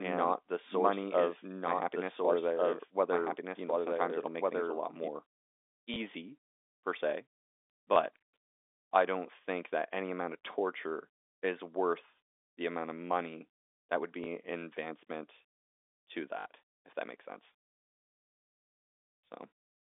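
Doubled audio track, from the start to 5.08 s: a full-band second copy of the speech trails the original by about a second and a half, a few dB quieter, and cuts off abruptly at 5.08 s. It carries no decay or room colour, so it sounds like a clean overlapping repeat rather than an echo. The cause is likely a second capture through a slower path, or an edit that left two out-of-step copies mixed together. The speech travels over G.711 telephone coding, which limits it to a line band of roughly 250 Hz to 3.6 kHz. Packet loss with last packet repeated occurs at 5.94–5.96 s, 7.94–7.96 s, 14.24–14.26 s and 16.40–16.46 s. Each of the first three is a single 20 ms gap, and the last is a 60 ms run. The receiver fills each gap by replaying the previous packet. The 60 ms run at 16.40 s produces a brief robotic stutter with a buzz near 50 Hz, which fits 20 ms packets.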